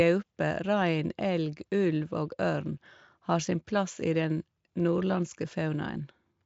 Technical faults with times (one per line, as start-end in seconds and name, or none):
4.80 dropped samples